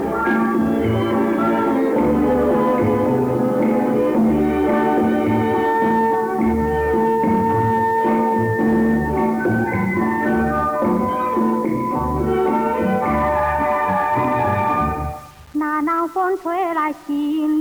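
From start to finish there's a grainy, buzzy roughness riding on the sound, and it shifts with whatever's playing. That points to low bit depth without dither, likely a rounding down to something like 6 bits. The rounding error is locked to the waveform, sitting roughly 30 dB below the signal, so quieter passages get grittier and the faintest bits sputter or drop out.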